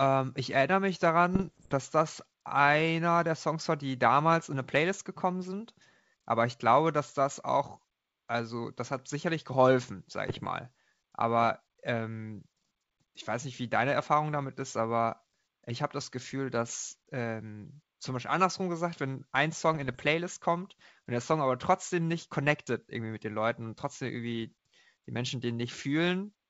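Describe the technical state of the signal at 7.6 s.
At 7.6 s the signal is intact, with no fault at that moment; the speech comes through the G.722 wideband telephone coding at 64 kbit/s, whose faint upper-band coding noise is part of the normal path.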